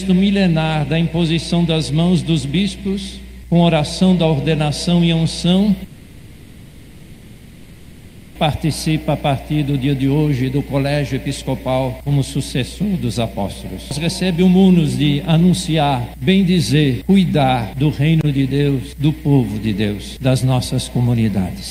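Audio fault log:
5.85–8.37 s, long network dropout: the sound turns into a buzzy, hissy fill for about 2.5 s, then resumes with that span missing, likely because packets never arrived.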